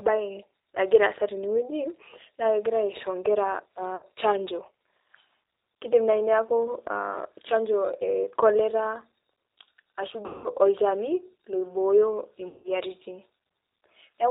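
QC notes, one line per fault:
Throughout: G.729 codec at 8 kbit/s. Speech is rebuilt from a vocal tract filter and sparse pulses, cut above 4 kHz, so it sounds plainly rough and synthetic.
3.96–4.05 s, 10.26–10.49 s, 12.48–12.71 s: VoIP packet loss concealed by the speech codec. The decoder stretches its last pitch and filter into a fading buzzy tone or coloured noise over 60, 180 and 160 ms gaps, and the voice stays weak afterwards.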